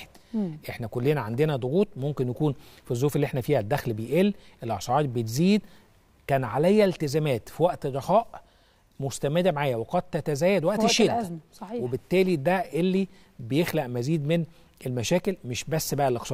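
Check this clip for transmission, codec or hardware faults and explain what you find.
Nothing in the transmission chain, the encoding or the hardware can be heard to fail at any point in this recording.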